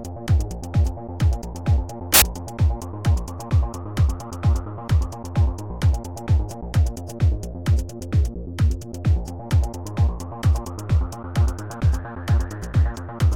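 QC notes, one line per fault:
2.14–2.22 s, samples built from the wrong bytes: the reader misassembled each sample's bytes, promoting the fast-changing low bits, producing an 80 ms burst of loud, harsh broadband noise.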